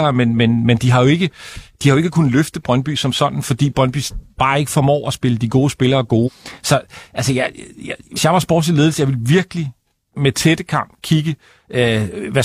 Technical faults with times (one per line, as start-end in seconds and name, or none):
6.23-6.29 compressed frames skipped
8.13-8.19 compressed frames skipped